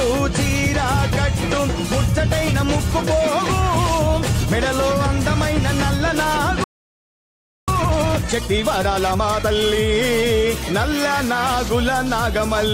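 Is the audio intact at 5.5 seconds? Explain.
Yes, at 5.5 seconds the audio plays through intact, with no dropout, click, distortion or other fault at that point.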